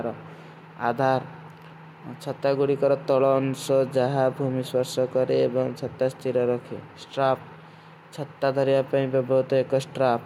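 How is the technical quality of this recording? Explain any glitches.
No glitches or technical faults can be heard here.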